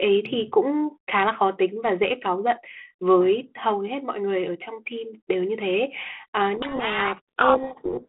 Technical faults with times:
6.54-8.08 codec payload misread

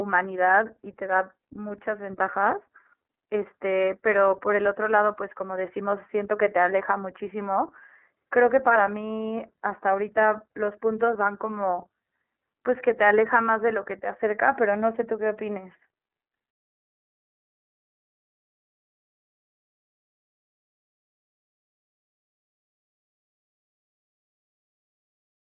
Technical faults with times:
0.00-25.52 iLBC codec

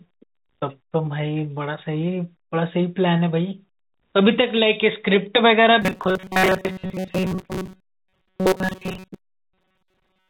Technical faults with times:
5.82-10.29 robotic sound from repeated short buffers

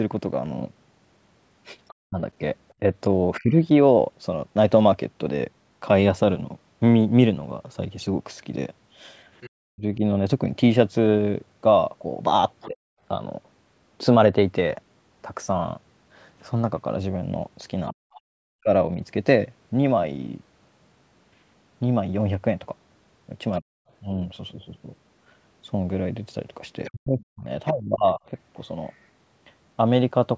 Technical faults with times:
1.88-2.74 other side's voice leaking through
2.08-3.69 speech suppressed in double talk
9.41-9.50 other side's voice leaking through
9.72-12.76 speech suppressed in double talk
12.61-12.65 other side's voice leaking through
17.88-18.21 other side's voice leaking through
17.93-18.70 speech suppressed in double talk
18.25-18.33 background gated by the echo canceller
23.60-23.71 speech suppressed in double talk
26.84-28.94 other side's voice leaking through
26.89-28.22 speech suppressed in double talk

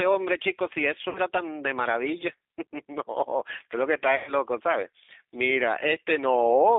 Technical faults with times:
0.00-6.78 G.729 codec
1.09-1.20 VoIP packet loss concealed by the speech codec
4.16-4.33 VoIP packet loss concealed by the speech codec

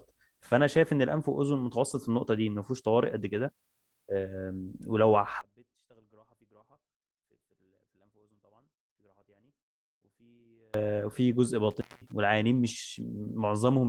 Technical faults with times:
5.41-10.74 one channel inverted
11.29 lost packet rebuilt from error correction
11.71-12.12 intermittent contact

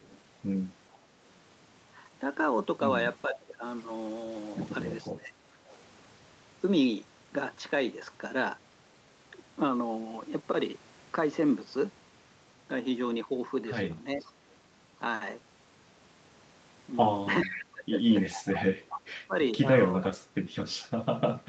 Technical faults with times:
0.00-0.19 echo leak
3.27-5.35 speech suppressed in double talk
5.68-5.79 echo leak
14.16-14.26 speech suppressed in double talk
14.19-14.56 echo leak
17.42-20.81 echo leak
17.46-21.48 speech suppressed in double talk

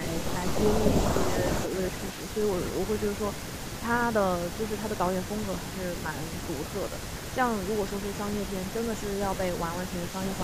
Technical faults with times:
0.00-1.02 echo leak
1.26-1.37 speech suppressed in double talk
1.64-10.44 echo leak

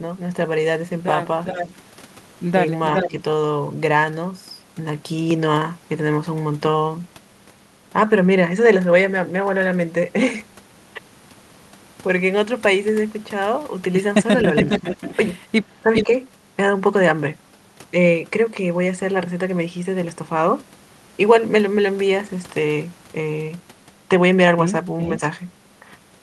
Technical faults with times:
1.45-1.72 echo leak
2.86-3.12 echo leak
3.08-3.17 speech suppressed in double talk
5.31-26.22 input switched to a poorer device
14.56-15.16 echo leak
14.64-14.82 speech suppressed in double talk
15.83-16.09 speech suppressed in double talk
15.93-16.06 echo leak

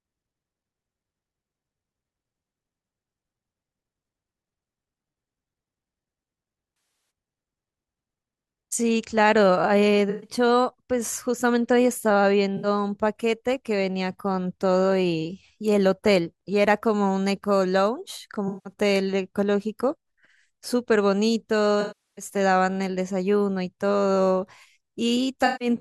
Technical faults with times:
6.76-7.10 AAC frame loss with concealment
10.09-10.30 AAC frame loss with concealment
12.57-12.67 AAC frame loss with concealment
18.48-18.73 AAC frame loss with concealment
21.81-22.25 AAC frame loss with concealment
25.45-25.68 AAC frame loss with concealment

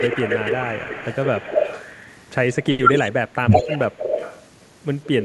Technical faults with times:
0.00-2.02 echo leak
2.81-3.12 echo leak
2.82-2.89 speech suppressed in double talk
3.41-3.50 speech suppressed in double talk
3.50-4.37 echo leak
5.04-5.24 echo leak

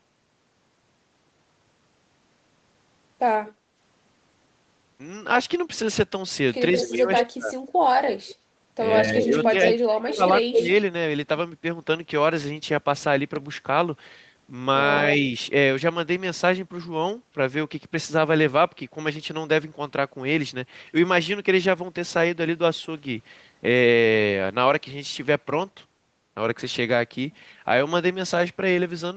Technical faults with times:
3.46-3.52 echo leak
3.57-3.74 background gated by the echo canceller
6.77-7.21 echo leak
6.80-7.56 speech suppressed in double talk
8.26-8.35 echo leak
9.02-10.68 speech suppressed in double talk
9.43-9.51 echo leak
10.10-10.67 echo leak

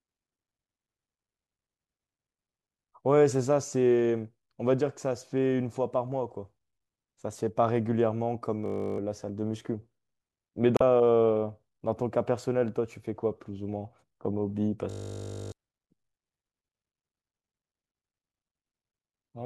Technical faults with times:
8.66-8.98 system hang loop
10.77-10.82 damaged data in a compressed stream
14.90-15.52 system hang loop

